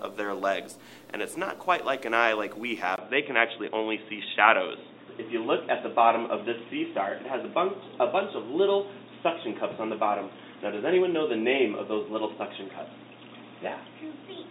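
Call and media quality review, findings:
Input switched to a poorer device, from 2.96 s to end. Brief 20 ms dropout at switch, then band capped near 3.8 kHz, dull boxy tone, faint new noise floor well below signal, level unchanged. Likely capture-path change to headset call profile or second mic. Distinct from codec bandwidth drop: the gap, the new device's own noise floor and tone shift all arrive together and never recover.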